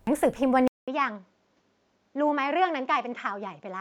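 A speech recording with a brief glitch at 0.07 s, typical of damaged data in a compressed stream: the decoder loses frame sync and searches for the next frame header, unlike a clean edit or dropout. From 0.68 s to the end, after a 200 ms silence, the sound turns duller, roughly 10 dB quieter, with nothing above 7.6 kHz and a new noise floor some 45 dB down. The lasting change of tone, level and noise, rather than a single glitch, points to an input switched to a poorer device, likely a different microphone or headset profile.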